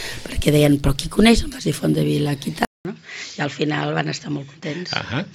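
At 2.65 s the audio drops out for about 200 ms, then returns duller, boxier and somewhat quieter, roughly 5 dB down, with a faint new noise floor sitting well below the signal. This likely reflects the input switched to a poorer device, one with a narrower band and its own tone. On a spectrogram, content above 7.6 kHz vanishes from 2.65 s onward behind a brief blank gap. The waveform shows a short flat section followed by lower amplitude through the end.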